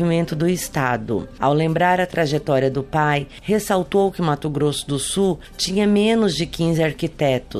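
At 2.13 to 2.15 s there are chunks out of order. A 10 ms chunk arrived one chunk late and was played after the chunk that should have followed it, so two short slices of sound swap places. That leaves three hard joins packed into about 20 ms, heard as a brief jumble. Unlike a dropout, nothing is missing and no gap of silence opens. Unlike a stutter, no slice is repeated.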